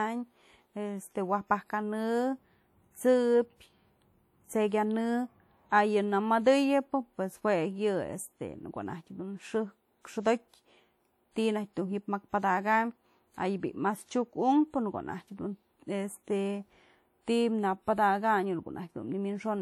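Speech throughout carries a ringing, washy smear with a hiss that swells and fades with the voice, and the damage is plainly audible. The likely cause is WMA compression from an early WMA 1 encoder at a rate around 48 kbps, with the spectrum stopping near 20.1 kHz.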